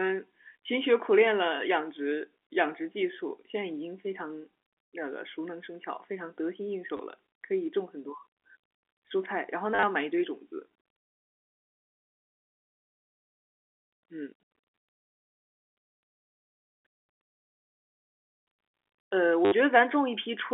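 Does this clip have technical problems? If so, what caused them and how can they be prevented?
Yes. There is packet loss with the last packet repeated at 6.97–6.99 s, 9.75–9.83 s and 19.45–19.52 s. Repeated audio buzzes robotically at about 100 Hz, which fits 10 ms packets. To prevent it, use a better network path or forward error correction and proper loss concealment. The G.711 telephone coding carries the 250 Hz–3.5 kHz line band with at most faint damage.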